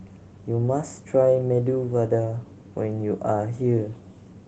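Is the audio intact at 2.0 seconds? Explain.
Yes, at 2.0 seconds the speech is intact, with no fault at that moment.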